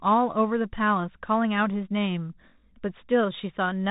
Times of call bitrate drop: none

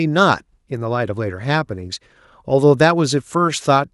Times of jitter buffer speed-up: none

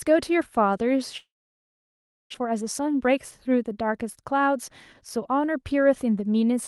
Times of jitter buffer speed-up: 2.44-3.89

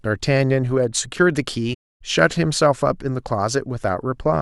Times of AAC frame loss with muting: 1.73-2.02

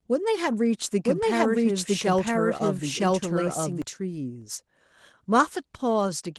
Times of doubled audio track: 1.04-3.82

